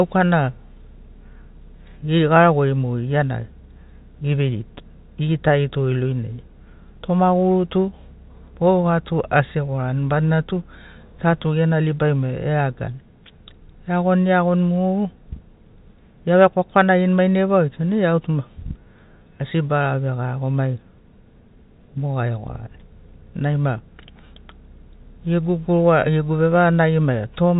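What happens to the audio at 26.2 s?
Nothing goes wrong at 26.2 s: the speech there is intact, with only the usual narrow telephone bandwidth of G.711 coding, which leaves nothing above about 3.8 kHz.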